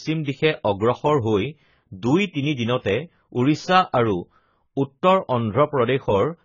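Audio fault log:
throughout AAC compression: the speech sounds dull, smeared and warbly, with heavy damage and a fizzy edge on sibilants, likely from AAC-LC coding at a rate that fits about 16 kbps. On a spectrogram, energy stops at a flat ceiling near 7 kHz.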